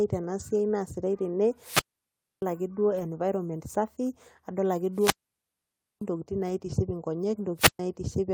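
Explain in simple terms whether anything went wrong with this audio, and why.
Yes, two things go wrong. First, there are short rough, fuzzy patches at 0.39 s, 2.91 to 3.05 s and 6.49 s. That's a lost packet rebuilt from error correction. Bits of the stream went missing, and the decoder filled them from a lower-quality backup copy, so you hear no gap, just a grainier moment.

Second, there's a wireless microphone squelch dropout at 1.58 to 2.47 s, 4.92 to 6.06 s and 7.56 to 7.79 s. The radio link fades, hiss creeps up, and then the receiver mutes everything for about 0.63 s, 0.91 s and 0.13 s before the sound comes back.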